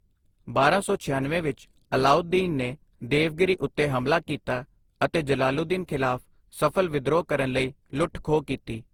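From start to finish the speech has a swirly, smeared and hollow quality, with consonant onsets blurred and built-up noise sitting under the voice. The spectrum still reaches about 20.2 kHz, so bandwidth alone does not explain the damage. The likely cause is generation loss: repeated decoding and re-encoding, around seven passes, with a lossy codec whose character fits Opus at 48 kbit/s. Each pass requantises on a shifted frame grid, so noise accumulates.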